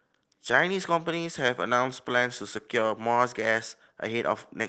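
From the start of the clip to its end, clock drift between sender and receiver runs underneath the speech. The sender's clock runs about two percent slow, so the receiver's jitter buffer keeps running low and must be topped up. The result is speech that drags very slightly, at a tempo that never quite settles. On a waveform nothing breaks, but syllable spacing is marginally stretched. On a spectrogram, which shows content stopping near 8 kHz as expected from an Opus call path at around 20 kbps, the harmonic tracks keep their pitch while their timing loosens.

From 0.08 s to 4.54 s, repeated timing corrections handle that drift. The receiver keeps inserting short repeated slices, all in the same direction and at uneven spacing, so playback runs at 98% speed and gains roughly a tenth of a second over the stretch. Each correction is slight, heard at most as a small hitch or a wobble in rhythm. 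A spectrogram shows brief duplicated frames, with a formant segment echoed immediately after itself. A waveform shows tiny repeated cycles at the splice points.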